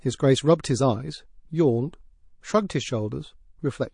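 From start to finish the speech has a watery, swirly quality, with the s sounds turning metallic and chirpy. That's plainly audible MP3 compression damage, likely from a low-bitrate encode, and the amount of smearing fits something around 40 kbps. With bits that scarce, the encoder lets quieter frequency detail flicker in and out between frames.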